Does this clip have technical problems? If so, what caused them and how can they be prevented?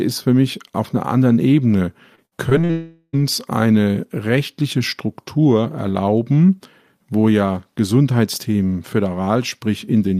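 Yes. Repeated packet loss (robotic sound) runs from 2.15 to 2.71 s. The speech turns choppy as five short holes arrive one after another. The longest is 60 ms, and about 160 ms of audio is lost in total. The receiver patches each hole by extending the previous sound, so roughly 28% of that half-second is synthetic filler. Preventing it requires a more stable connection or a larger jitter buffer with forward error correction.

A long network dropout follows directly, from 2.71 to 3.15 s. For about 0.42 s no real audio gets through. The whole gap is filled with a stretched continuation of the last sound, which smears into a buzzy, fading tone, and then the speech resumes with that section gone. The likely cause is a brief stall in the network path that outlasted the receiver's buffer. A wired or less congested link, with redundancy and retransmission enabled, would guard against it.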